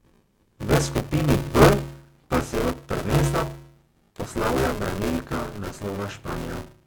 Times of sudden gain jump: none

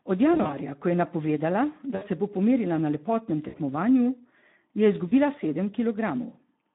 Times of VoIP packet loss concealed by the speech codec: 0.33-0.59, 1.95-2.03, 3.47-3.58, 5.07-5.13

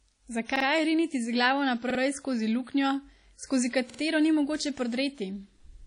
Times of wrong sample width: none

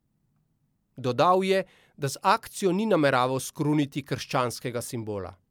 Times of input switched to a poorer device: none

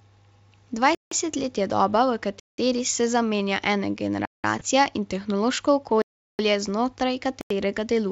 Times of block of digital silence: 0.95-1.11, 2.40-2.58, 4.25-4.44, 6.02-6.39, 7.41-7.50

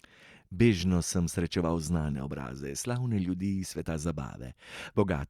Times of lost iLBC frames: none

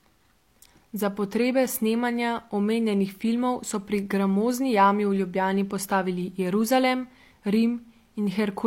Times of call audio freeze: none

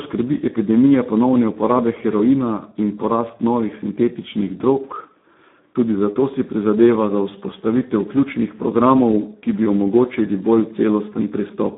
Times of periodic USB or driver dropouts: none

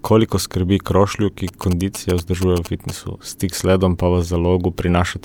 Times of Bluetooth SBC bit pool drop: none

